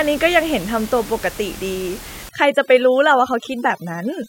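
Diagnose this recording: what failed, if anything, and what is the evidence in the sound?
From 2.29 s to the end, speech over near-silent twinkling background: overdone noise removal in call processing, gating bands near its noise estimate and pulling down the room noise.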